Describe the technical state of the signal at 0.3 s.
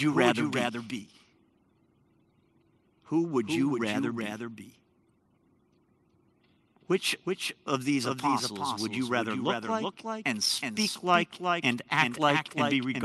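The speech carries a second, quieter copy of itself trailing roughly 0.4 s behind, a dry, full-band repeat with no room decay, present throughout the clip. This doubled audio track likely comes from the signal being captured twice along a slower path, giving a copy about 5 dB down, heard through the Opus call path's 12 kHz bandwidth.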